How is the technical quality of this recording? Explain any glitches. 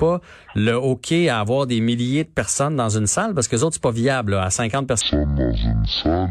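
The recording has one glitch, in its final stretch. From 5.01 s to 6.30 s the speech suddenly drags to half speed and drops a full octave, 12 semitones down, with a fainter mirror image of the sound riding above it. This is stereo read as mono: the left and right samples, which alternate in the file, are played back in sequence as one channel. Each moment therefore takes twice as long, and the alternation folds a weaker mirror copy of the sound into the upper half of the spectrum.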